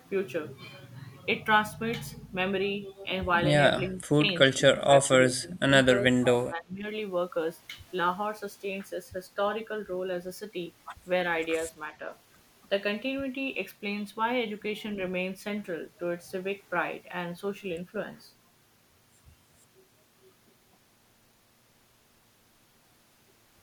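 Speech suppressed in double talk is the likely cause: the echo canceller, treating the talker as loudspeaker echo, turns the speech down at 3.88 s, 4.12 s, 4.74 to 5.13 s, 5.4 to 5.71 s and 5.99 to 6.85 s. The speech dips briefly, then sinks deeper, roughly 25 dB at its deepest, in the longer stretches.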